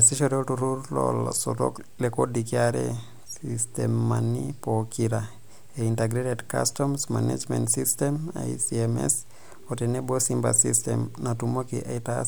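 No technical faults can be heard anywhere in the speech recording. There is nothing at any point that calls for a timestamp or a closer listen.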